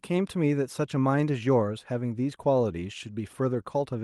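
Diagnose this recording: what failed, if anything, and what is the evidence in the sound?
Nothing failed in this recording.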